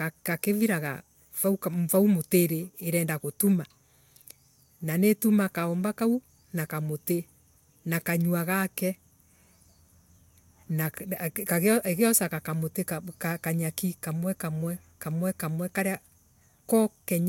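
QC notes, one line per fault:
No fault found in the speech, so there is nothing to log in these QC notes.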